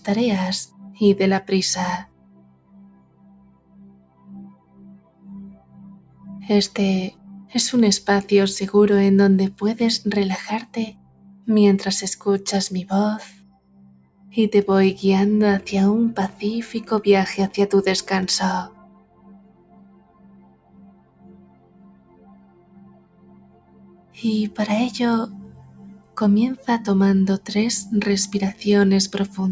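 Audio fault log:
throughout: noise suppressor applied to music or sounds. A suppressor tuned for speech stays active across the whole clip and treats steady, sustained content as noise. Its gain swings by around 20 dB as it decides what to keep, so onsets pass while held portions and tails are pulled down, giving a pumping, fluttering, thinned texture. Unlike compressor pumping, which follows overall loudness, these dips follow how steady the sound is.
0.67–1.01, 2.05–6.25, 7.11–7.52, 10.66–11.48, 13.28–14.37, 18.69–24.17, 25.48–26.16: sound cut by the noise suppressor. In each span, sustained material is pushed down by about 10 to 11 dB at its deepest. The longest stretches run several seconds, near 2–6 s and 19–24 s, and the others last a fraction of a second to about a second. Attacks survive while decays sink or end early. That separates these cuts from dropouts, which silence everything abruptly regardless of content.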